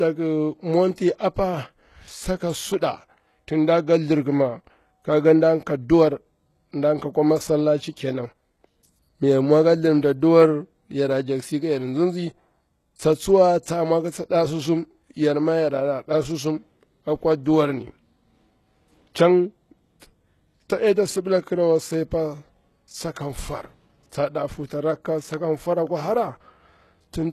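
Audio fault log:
throughout: HE-AAC compression. The treble was likely rebuilt by spectral band replication from copied lower bands rather than coded directly, which fits a low bitrate around 16 kbps. The highs are mismatched, s sounds turn gritty and lispy, and nothing remains above 12.3 kHz.
0.95–0.98 s and 20.00–20.02 s: pre-echo. A sharp attack fell late in a transform block, so quantisation noise sized for the loud onset spread into the quiet moment before it. A brief hiss of about 26 ms and 22 ms runs ahead of each attack, which sounds softened and smeared.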